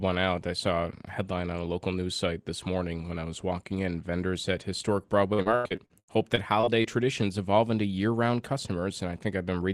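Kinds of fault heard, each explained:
repeated packet loss (robotic sound): right after "in vendors at historic", about a dozen short dropouts, up to 82 ms each, get patched by stretching the last sound, leaving it choppy.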